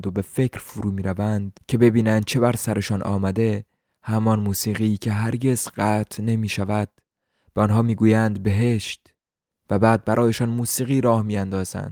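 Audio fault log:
No technical fault is audible anywhere in the speech signal.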